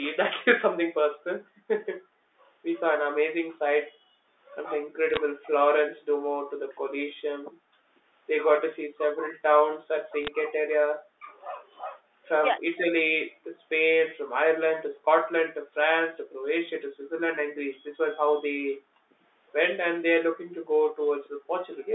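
From 0.2 to 21.03 s the speech repeatedly sinks, by up to about 40 dB and for roughly five seconds in total. This is most likely speech suppressed in double talk. The waveform shows deep notches, and the spectrogram thins out in its upper band.

At 5.10 to 5.17 s and again at 10.21 to 10.28 s, bit errors on a digital phone line corrupt single samples into sharp ticks. They appear as isolated needle spikes in the waveform and as thin vertical broadband lines on the spectrogram.

At 5.97 to 6.01 s a brief echo leak, likely from a loudspeaker path the canceller did not fully remove, returns the voice 261 ms late at about 30 dB below it. It shows as a faint, smeared, delayed copy of the harmonics.

The background is then gated by the echo canceller, with the room sound dropping about 34 dB at 6.15 to 6.34 s. It dips about 40 dB in short bursts between 14.93 and 18.81 s and between 20.46 and 21.92 s. 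These show as dark gaps in the noise floor.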